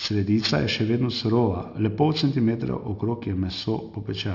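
Throughout, the speech was resampled down without an anti-aliasing filter, which fits a drop from 48 kHz to 12 kHz. Energy above 6 kHz folds back below it, some 15 dB under the speech, so sibilants turn gritty and metallic, with unrelated tones crowding the band edge.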